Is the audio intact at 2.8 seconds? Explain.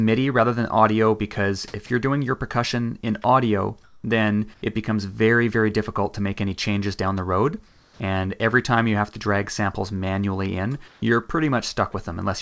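Yes, at 2.8 seconds the audio is intact, with the sound passing cleanly through the call path, whose codec leaves nothing above 8 kHz.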